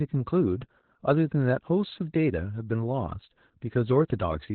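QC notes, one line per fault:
Throughout: Opus voice compression. The speech is heavily coded and sounds muffled, hoarse and slightly robotic. Almost nothing is left above 4.2 kHz. The band has been cut to narrowband, so consonants lose their edge. The linear-prediction coder, SILK, rebuilds the voice from a coarse model of the excitation, which gives the rasp and the synthetic tone. The damage fits an Opus stream running near 8 kbps.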